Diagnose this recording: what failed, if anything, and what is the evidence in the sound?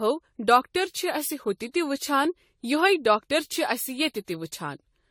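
Swirly, hollow speech with blurred attacks and nothing above 17.9 kHz throughout: likely codec generation loss from roughly ten successive lossy re-encodes, fitting 64 kbit/s AAC.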